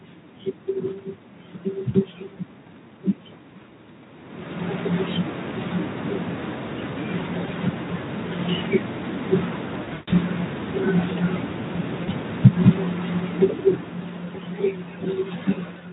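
Speech that breaks into brief smeared stretches at 7.45 to 7.51 s and 12.03 to 12.09 s. The worst is at 9.83 to 10.13 s, where the sound is stretched and fades, then comes back weak. This is VoIP packet loss concealed by the speech codec. About 20 ms, 40 ms and 220 ms of audio went missing; the 220 ms was scattered over 280 ms with a longest gap of 140 ms. The decoder filled each gap by stretching its last pitch and filter while lowering the gain, so the voice stays distorted for a while after each gap. From 12.3 s to 14.82 s the level sinks by about 11 dB, speech and background together. That is automatic gain falling: the gain control judged the input too loud, or its background noise too strong, and wound its gain down gradually.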